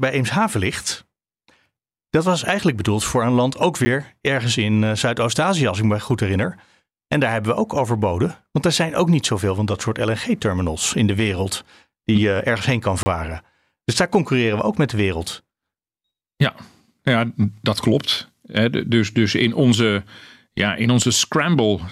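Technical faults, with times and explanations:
3.85 s, block of digital silence: about 10 ms of output samples dropped to zero between "voor een land ook" and "ergens in eh", too short to hear as silence, so it comes across as a tick or dip.
13.03–13.06 s, block of digital silence: a 30 ms run of samples zeroed just after "eh ergens heen kan". The hard cut and return leave a short hole in the speech.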